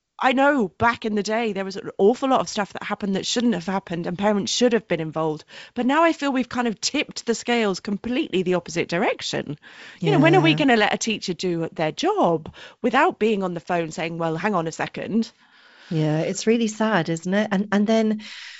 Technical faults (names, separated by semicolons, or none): none